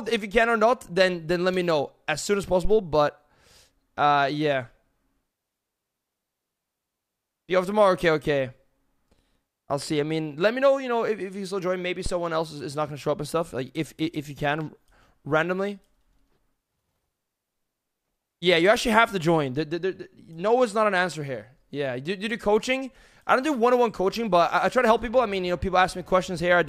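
Two deep, dull thumps interrupt the audio, one from 2.65 to 2.83 s peaking at about -14 dBFS and dying away over roughly 40 ms, and a shorter one from 12.06 to 12.16 s at about -17 dBFS with a 22 ms decay. Both are phantom power thumps: a supply switched on or off while the input was live sent a sudden voltage step through the coupling capacitors, which the preamp passed on as a low, quickly fading pulse.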